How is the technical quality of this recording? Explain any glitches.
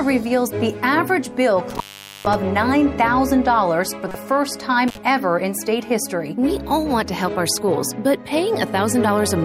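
The recording has three audible glitches of two kinds.

From 1.70 to 2.35 s the sound drops out for about 450 ms, with crackle at either edge and faint hiss in the gap. A second, shorter dropout of about 50 ms falls between 4.88 and 4.97 s. Both are intermittent contact: a loose cable or plug briefly breaks the signal path.

At 4.09 to 4.15 s there is a short glitch peaking at about -10 dBFS. This is a corrupt frame decoded: damaged compressed data was played anyway, spraying energy at wrong frequencies for a span that fits a couple of frames.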